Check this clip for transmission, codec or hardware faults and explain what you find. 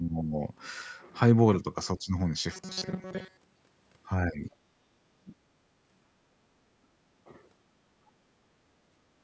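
Three kinds of fault are audible: repeated dips in level, two stretches of metallic buzzing, and a faint second voice.

Speech suppressed in double talk appears at 0.0–0.4 s, 1.97–2.15 s, 4.28–4.5 s and 5.2–5.39 s. The voice drops by about 15 dB in the first two, about 10 dB in the third and about 30 dB in the last. The likely cause is an echo canceller that could not separate the near talker from loudspeaker echo and attenuated both.

Robotic sound from repeated short buffers runs from 2.52 to 3.78 s and from 5.02 to 6.29 s. The sound turns into a rigid metallic buzz at 188 Hz that loosely tracks the speech, with most of the audio in those stretches repeated rather than new. A period of about 5.3 ms is consistent with the likely cause: playback looping a very short buffer while fresh audio failed to arrive.

Other side's voice leaking through is heard briefly at 4.46–4.56 s. It is faint, at about 30 dB below the speech, and overlaps the end of the third level dip. 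The likely cause is far-end audio from the loudspeaker reaching the microphone and not being fully cancelled. The band limit at 8 kHz comes from the call's microphone processing and is not part of these faults.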